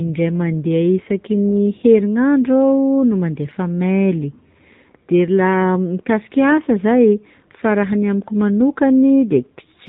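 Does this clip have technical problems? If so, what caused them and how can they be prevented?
Yes. AMR narrowband mobile codec throughout: nothing above 4 kHz, and buzzy, synthetic speech that fits a low bitrate near 7.4 kbps. Prevent it with wideband or higher-bitrate coding.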